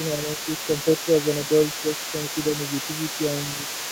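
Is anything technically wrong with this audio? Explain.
Yes. Two related faults are audible.

Other side's voice leaking through: from the start to the end of the clip, a second voice runs underneath the speech, roughly 10 dB below it. The likely cause is a far-end signal played on the talker's loudspeaker, picked up again by the microphone and not fully removed by the echo canceller. The leaked voice stays present throughout as a quieter, secondary layer rather than appearing only in brief scraps.

Speech suppressed in double talk: between 0.26 and 0.39 s, while the leaked voice overlaps the talker, the speech briefly dips by a few decibels, lasting a few tens of milliseconds in total. This is likely the echo canceller failing to tell the talker apart from the loudspeaker echo during simultaneous speech and attenuating everything at once, which pulls the wanted voice down along with the echo.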